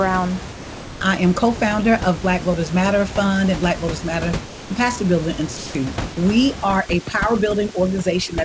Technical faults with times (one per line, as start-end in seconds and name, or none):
0.53-1.01 sound dropped by the voice detector
4.46-4.70 sound dropped by the voice detector
5.57-5.75 sound dropped by the voice detector
6.11-6.17 sound dropped by the voice detector
6.64-8.45 overdone noise removal